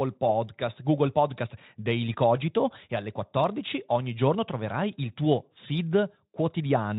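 Nothing in this speech clip stood out as a technical problem on listening.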